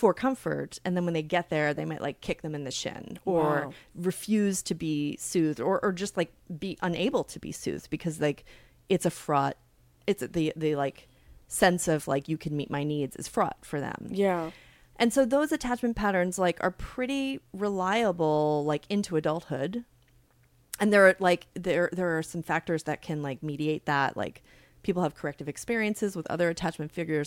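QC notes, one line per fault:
No faults heard anywhere in the speech.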